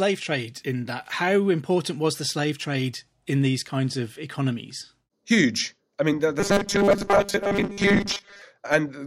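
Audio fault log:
6.40 to 8.42 s, robotic sound from repeated short buffers: just after "economies huge I mean", fresh audio likely stopped arriving in time, so the playback side kept refilling the gap by replaying its last short slice, which fits a buffer of about 5 ms, while most of the real signal in this stretch was skipped. Those rapid repeats impose a fixed 200 Hz pitch, turning the speech into a stiff metallic buzz that only loosely tracks the words.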